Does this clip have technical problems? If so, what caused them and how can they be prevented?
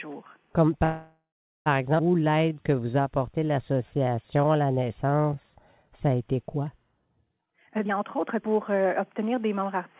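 Yes, there are four clear problems, all heard through a narrowband call path that cuts everything above 4 kHz, which fits G.711 mu-law at 64 kbps.

Call audio freeze, 0.84 to 1.68 s: the sound stalls and the last bit is stretched into a fading buzz that drops to silence for roughly 0.39 s before picking up where it left off. That's an 0.82 s hole inserted into the audio, with nothing lost. The likely cause is packets held up in the network so the jitter buffer ran dry. A steadier network path, or a larger minimum jitter buffer on links known to stall, would prevent it.

Skip ahead, 1.98 to 2.01 s: playback jumps forward almost seamlessly, and about half a second of audio is simply gone, with the two sides butted together. That stretch was dropped, either on the way or by an overflowing jitter buffer, while later audio was already waiting. Smoothing the delivery of late packets, or letting the buffer drain gradually instead of dropping a chunk, would prevent it.

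Jitter buffer slow-down, 2.19 to 6.34 s: the audio plays at about 88% speed at unchanged pitch, with drawn-out sounds, because the receiver repeated pitch periods over and over to add roughly 506 ms of reserve. Keeping the buffer from running low, with a steadier link or a slightly higher standing delay, would avoid the need to stretch.

Jitter buffer speed-up, 7.41 to 9.77 s: now it runs at about 130% speed, same pitch, sounding hurried. Around 0.7 s of short pitch-period slices was cut out to shrink an overfull buffer. Preventing bursty packet arrival, or capping how aggressively the buffer compresses, would keep this in check.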